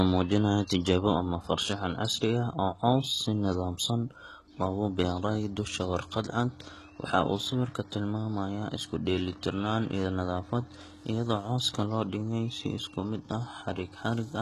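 All the way through, the speech carries heavy HE-AAC compression damage, likely from a very low-bitrate stream, something around 16 kbps. Nothing survives above 12.4 kHz, and the treble below that line sounds synthetic: the codec spends its bits on the low band and fakes the highs by copying lower bands up under a rough envelope. The harmonics don't line up across that seam, so the s sounds come out gritty, metallic and a bit lispy.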